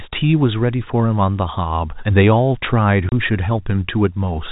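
Speech over a G.711 telephone path is cut at 3.09–3.12 s by packet loss filled with silence. The 30 ms dead gap, consistent with three 10 ms packets, has hard edges rather than a concealment smear.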